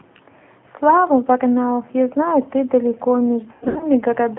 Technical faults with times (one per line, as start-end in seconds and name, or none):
0.00-4.38 G.729 codec
3.52-3.87 VoIP packet loss concealed by the speech codec